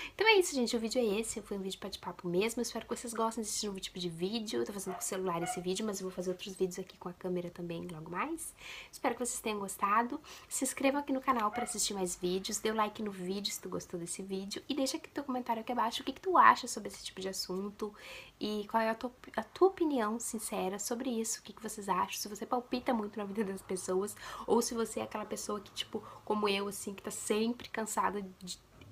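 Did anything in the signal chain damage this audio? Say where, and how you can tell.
No, nothing in the signal chain has left an audible mark on this audio. No stage of the path can be heard acting on the sound at any point.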